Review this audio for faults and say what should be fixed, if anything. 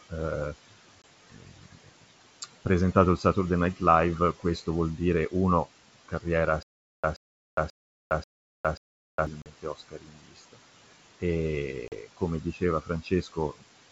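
Noise suppressor artifacts run through the whole clip. The suppressor pulls the steady room noise down by about 17 dB frame by frame, so the background sinks in pauses and swells back under the speech. Lowering the suppression depth or smoothing its gain across frames would prevent this.

Packet loss on an ADPCM call is heard at 1.02 s (a 20 ms hole, about one packet), 9.42 to 9.47 s and 11.88 to 11.94 s (40 ms each, a couple of packets). Each gap is a hard-edged silence. Afterwards the decoder's predictor and step size no longer match the sender's, so the speech resumes with brief distortion. Concealment that resets or re-syncs the ADPCM state after a loss would stop this.

Speech cut by the noise suppressor occurs at 1.3 to 3.81 s, 4.4 to 10.64 s and 11.2 to 13.63 s. Soft consonants, word endings and quieter passages are treated as noise and dropped by up to about 19 dB, sounding swallowed. 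The damage totals roughly half a second, two seconds and one second in those spans. A better speech-presence detector and a gain floor would protect this material.

Stutter with silent gaps occupies 6.63 to 9.27 s. A 128 ms fragment plays five times at a steady 537 ms interval, with 409 ms of digital silence after each repeat, and the audio due in that stretch never arrives. This is likely a stalled player or stream replaying its last buffer on each retry. Deeper buffering and underrun handling that conceals the gap instead of looping would prevent it.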